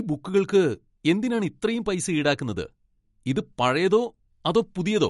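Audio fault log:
Throughout, MP3 compression: the speech has a hard ceiling, with nothing above 11.2 kHz, and plainly audible watery, swirling artefacts. The likely cause is an encoder short of bits that has cut the treble at a fixed frequency and dropped weak frequency lines, which then flicker on and off from frame to frame. That makes s sounds chirp metallically and blurs consonant attacks, damage that fits a low bitrate of about 48 kbps.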